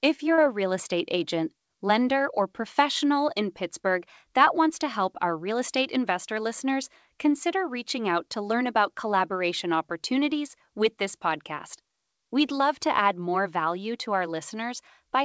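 Short concealed packet loss at 0.34 to 0.40 s, just before "a real estate agent": about 40 ms of the stream failed to arrive at the decoder in time, and the receiver covered the gap by extending the preceding sound for roughly 37 ms before crossfading back into the real signal. It comes across as a brief smear or wobble in the speech. The call path's band limit is audible too, with nothing above 8 kHz, which fits G.722 at 64 kbps.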